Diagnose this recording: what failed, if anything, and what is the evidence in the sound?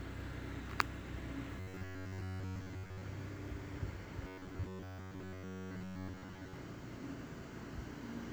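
Two stretches, 1.60 to 3.04 s and 4.27 to 6.54 s, collapse into a rigid, metallic buzz pitched at 93.8 Hz, with the sound's rough shape still poking through. That's robotic sound from repeated short buffers, and the likely culprit is the driver or buffer stage starving. Audio arrives too seldom, so a chunk of about 10.7 ms gets replayed to fill the gaps. Most of the time in those stretches is repeat, not fresh audio.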